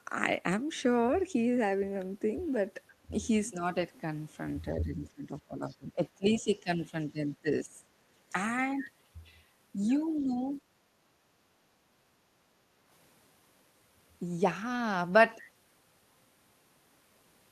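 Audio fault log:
4.72–6.94 s, 7.11–7.88 s, 10.19–10.33 s, speech suppressed in double talk: The speech dips by up to roughly 20 dB, then 10 dB. Both sides likely talked at once, so the canceller turned the talker down.
6.41–6.6 s, 10.19–10.24 s, other side's voice leaking through: Faint scraps of a second voice sit roughly 35 dB below the speech. The canceller likely left some loudspeaker sound in the microphone.
11.74–12.86 s, background gated by the echo canceller: The room sound drops by about 7 dB for around a second, then returns. The canceller clamped the microphone while the loudspeaker played.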